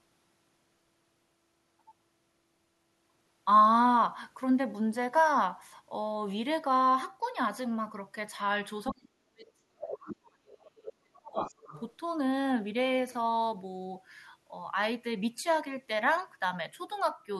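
From 8.91 to 11.37 s the talker's speech is suppressed in double talk, ducking by roughly 40 dB. The likely cause is an echo canceller turning down both voices while both sides speak. The other side's voice leaks through at 9.9 s and 10.48 s as brief fragments, and again from 11.39 to 11.82 s, at about 15 to 30 dB below the speech.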